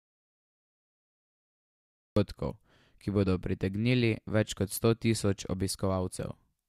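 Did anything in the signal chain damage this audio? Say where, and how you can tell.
Yes. There's an audio dropout to silence from the very start to about 2.17 s: the speech comes in mid-flow out of silence, with no room tone underneath. That's likely a lost input, a dropped device or link, while the recorder kept writing silence.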